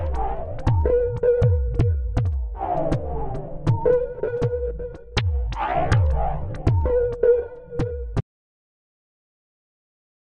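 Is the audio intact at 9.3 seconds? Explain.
No. At 9.3 seconds you're inside an audio dropout to silence that starts at about 8.21 s and runs to the end. The sound just cuts out to silence with no room tone, most likely because the input was lost while recording carried on writing silence.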